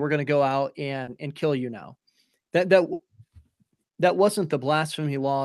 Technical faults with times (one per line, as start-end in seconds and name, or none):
1.03-1.09 short concealed packet loss
2.93-3.01 burst of packet loss